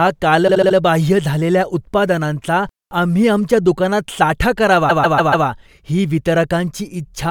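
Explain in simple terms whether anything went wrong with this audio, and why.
Repeated frames, at 0.47 to 0.76 s and again at 4.89 to 5.46 s, just after "आम्ही आमच्या दुकानात साठा". A short stretch of the speech plays five times in a row, 72 ms the first time and 144 ms the second, making a stutter. Copied chunks of compressed audio caused it, adding 0.29 and 0.58 s.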